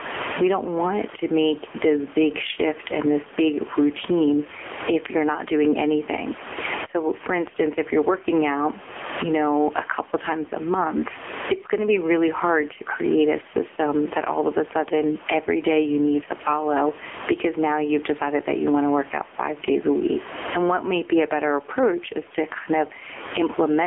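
Throughout the speech, the level pumps up and down, pulled down under each louder syllable, a level swing of roughly 25 dB. This gain pumping likely comes from input gain set far too high, with a fast limiter clamping every peak. On the waveform, the quiet gaps rise toward the level of the speech, and the envelope looks flattened. Room noise sits about 30 dB below the speech.

The whole clip also carries AMR narrowband mobile codec damage, and it is heavy. The speech sounds buzzy and synthetic, and the background churns into a watery warble. The heaviness points to a low bitrate, around 6.7 kbps. A spectrogram shows energy confined to roughly 250 Hz to 3.4 kHz, with nothing at all above 3.6 kHz.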